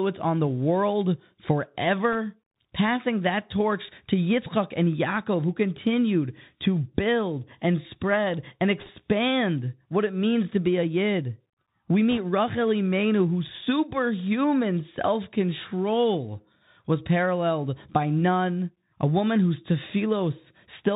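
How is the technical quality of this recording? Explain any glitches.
The recording is speech carried over a Bluetooth headset link, so it is narrowband throughout, with three short bursts of link damage.

Bluetooth CVSD headset codec, whole clip: the sound fits a 64 kbps CVSD stream, where each sample is coded as a single up-or-down step of adaptive size. Nothing above 4 kHz survives. S sounds come out scratchy, and a granular hiss sits under the speech.

Bit errors on a Bluetooth voice link, at 2.12–2.15 s, 8.79–8.90 s (just after "build and spread and") and 12.11–12.18 s: flipped bits in the one-bit stream each nudge the waveform only slightly and fade quickly. The result is a brief rushing crackle rather than clicks. It is roughest at 8.8 s, where the error rate is around 1.5 percent.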